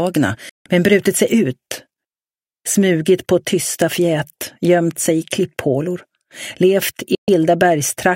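At 0.49 s and again at 7.15 s, a digital broadcast dropout mutes the sound with a 3 ms fade for about 160 ms, then 128 ms, consistent with roughly five and four 32 ms frames failing. The receiver silenced output until valid frames resumed, so that programme is lost.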